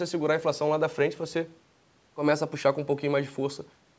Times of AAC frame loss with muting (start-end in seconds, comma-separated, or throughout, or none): none